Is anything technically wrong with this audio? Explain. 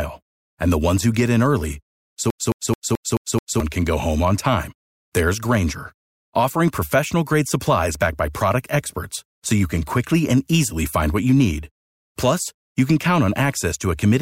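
Yes. A CD stuck on one turn runs from 2.30 to 3.60 s, after "get in early so". A scratch throws the laser back a track each rotation, so the same 0.22 s of speech plays six times with a brief mute at each jump. The result is a fast, even stutter before "can go home on".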